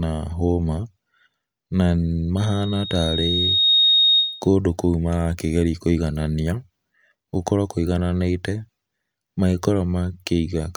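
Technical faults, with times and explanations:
2.37–4.49 s, loudspeaker feedback squeal: the microphone is picking up its own loudspeaker, and around 3.7 kHz the loop gain passes one, so a single tone swells over about a second and a half to roughly 5 dB above the speech before it stops, just ahead of "kũu marakĩgerĩa kũĩgananĩa".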